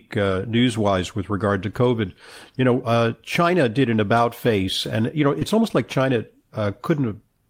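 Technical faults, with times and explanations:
5.39 to 5.43 s, short concealed packet loss. About 20 ms of audio did not arrive in time to be decoded. The receiver covered the hole by extending the sound just before it, carrying on its pitch where the speech was voiced and shaped noise where it was not. Then it blended back into the real signal. Because roughly 17 ms was filled this way, the moment comes across as a brief smear or wobble.
5.41 to 5.43 s, lost packet rebuilt from error correction. One packet went missing, but the next one carried a low-bitrate copy of it, the in-band forward error correction Opus can send. The decoder played that copy, so about 20 ms is restored with no gap. The rebuilt stretch sounds rougher and noisier than the speech around it, because the backup holds far less detail than the original packet did.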